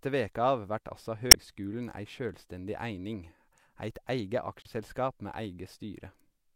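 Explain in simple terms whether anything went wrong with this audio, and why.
Two quick glitches in this speech come from damaged data in a compressed stream: right after "veke av vert altså" at 1.31–1.35 s, and after "eit eige" at 4.62–4.67 s. The decoder hits garbled bytes, loses its place, and stumbles briefly before catching up again.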